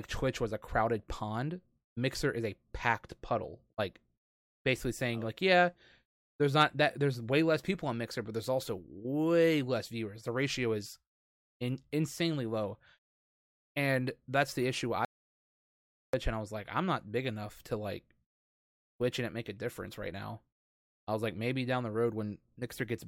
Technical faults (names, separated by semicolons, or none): audio dropout to silence